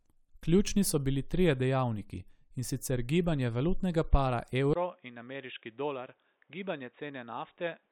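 Input switched to a poorer device, from 4.73 s to the end: after a 20 ms gap the speech suddenly turns dull and boxy, with nothing above 3.8 kHz, drops by roughly 10 dB, and picks up a new background noise sitting around 40 dB below it. The likely cause is the recording path changing microphones mid-take, moving to a narrower-band device with its own tone, gain and noise floor.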